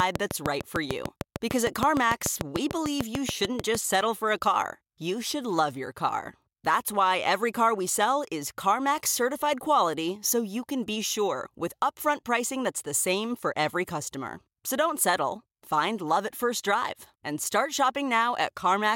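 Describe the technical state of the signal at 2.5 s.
At 2.5 s a steady ticking sits over the speech, about 6.7 sharp clicks per second, evenly spaced and peaking roughly 20 dB above the speech. This train of clicks runs from 0.00 to 3.76 s, likely caused by interference from nearby equipment or a faulty connection or power supply.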